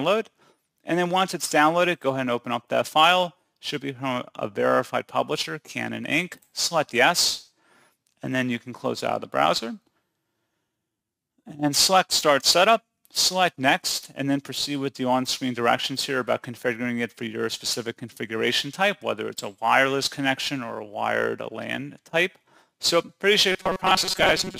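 From 23.52 s to the end at 24.60 s, the sound turns rigid and metallic, with a fixed buzz near 188 Hz imposed on it. This is robotic sound from repeated short buffers, likely caused by audio arriving too slowly, so a segment of about 5.3 ms keeps repeating for roughly half of the span.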